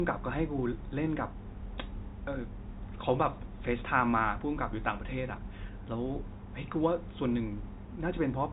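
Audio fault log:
No faults heard.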